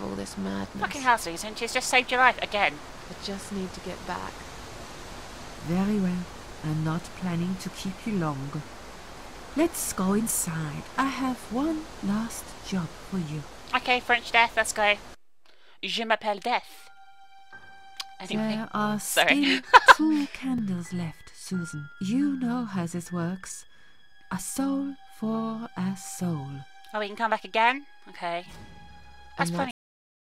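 At 29.71 s the audio has a cut-off end: the sound stops mid-event and falls straight to digital silence, with no decay, for the final 0.69 s. The closing buffers were never written or played back, so the signal simply ends rather than fading.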